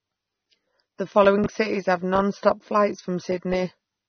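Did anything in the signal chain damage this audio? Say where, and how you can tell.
Yes, in two places. Throughout, the speech is dull and smeared, with nothing above 6.3 kHz and a plainly audible swirly texture on sibilants. That's likely AAC compression at the codec stage, with the encoder dropping the top band at a bitrate somewhere under 30 kbps.

Between 1.38 and 1.46 s there's a short jumbled moment, which points to chunks out of order in the buffer or storage stage. A 20 ms chunk landed three chunks late, so that stretch plays scrambled, with hard joins where the pieces meet.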